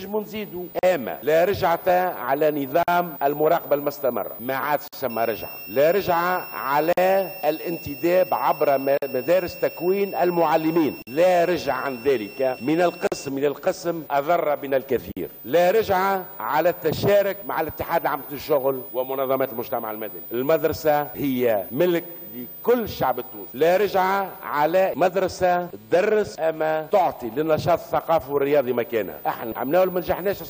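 Short silences cut into the sound at 0.79, 2.83, 4.88, 6.93, 8.98, 11.02, 13.07 and 15.12 s, every 2 s. Each lasts about 48 ms; the first lasts 40 ms. This is a gap at a join of encoded pieces. Separately encoded segments were joined untrimmed, so encoder delay and padding leave silence whose edges the codec smears.

From 5.10 to 13.29 s, a high whistle near 2.7 kHz sits roughly 20 dB under the sound. It is switching supply whistle from a power supply running in an audible burst mode or beating with another one.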